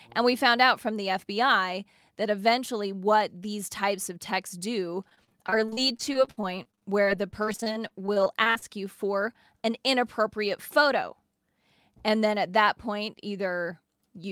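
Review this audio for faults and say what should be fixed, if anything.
Sample clock jitter runs through the whole clip, a faint hiss that grows on loud, bright passages. It points to roughly a microsecond and a half of timing wobble, with the error sitting about 40 dB down.

From 5.09 to 8.64 s there's repeated packet loss with a robotic sound: dozens of short dropouts, the longest 58 ms, patched by stretching the previous sound, so roughly a fifth of that stretch is fill.

To prevent it, give the converter a cleaner, stable clock and use a bigger jitter buffer or steadier network path for the stream.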